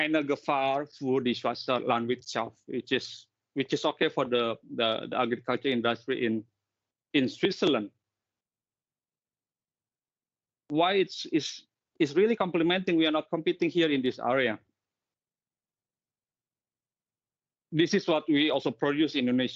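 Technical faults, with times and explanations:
Nothing wrong turns up here at all; there's not a single technical fault to flag anywhere in the recording.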